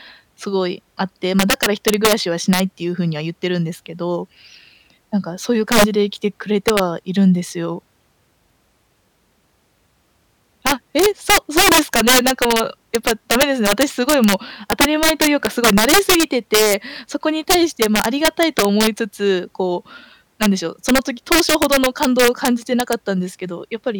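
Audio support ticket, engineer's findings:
Integer overflow throughout the speech. Violent cracks on loud peaks, sharper than clipping. Gain about 9 dB too hot. Around one percent of samples wrap to the opposite sign instead of limiting.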